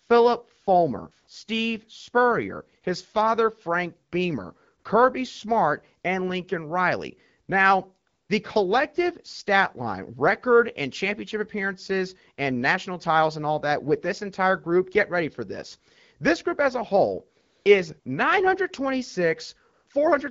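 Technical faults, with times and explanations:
0.63–0.67, 1.11–1.27, 2.81, 4.79–4.83, 8.07–8.29, 17.41–17.65, 17.99–18.05 and 19.73–19.87 s, AMR comfort noise: in these pauses, from 20 to 240 ms long, the real background gives way to a smooth, steady hiss that switches in and out, just before "his father" and after "group as a whole" and "as a whole is". The phone judged the talker silent and stopped sending speech frames, so the receiver synthesised noise from a rough description of the background's level and spectrum.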